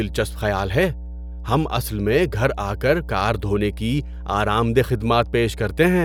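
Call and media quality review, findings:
Mains hum, present for the entire speech clip. Steady 60 Hz tone with low harmonics, loud, roughly 10 dB below the speech. Probable component: ground loop between interconnected devices or unshielded cabling near a transformer. Mechanism: power-line current coupling into the signal path. Check grounding and cable routing first.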